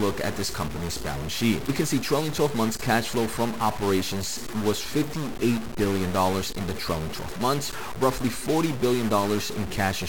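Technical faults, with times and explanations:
Throughout, stuck bit: the speech carries a harsh, buzzy grit that rides on every syllable, and the pauses fill with a rough, steady hiss instead of going quiet. The likely cause is one data bit held at a fixed value, so roughly half the samples are pushed off by a step of about -30 dBFS in a pattern that tracks the waveform. Near silence the small values keep flipping sign, which turns that offset into audible noise between phrases.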